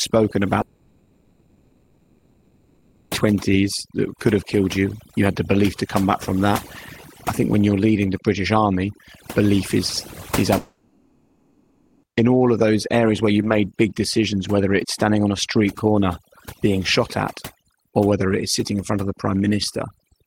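Overdone noise removal runs through the whole speech clip. The noise reducer was set so hard that frequency bands near its noise estimate are pushed down or switched off, leaving a lowered background that breaks up into twinkling specks, with the quieter detail of the voice stripped away.

A long network dropout is the likely cause of two gaps, from 0.61 to 3.13 s and from 10.57 to 12.05 s. For about 2.5 s and then about 1.5 s, the sound is replaced by a stretched buzz of the last sound that fades, and the speech resumes further on with that stretch missing.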